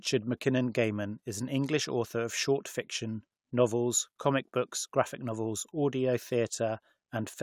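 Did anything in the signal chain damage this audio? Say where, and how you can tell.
No, nothing audible in this speech points to damage at any stage of the chain, from capture through to playback.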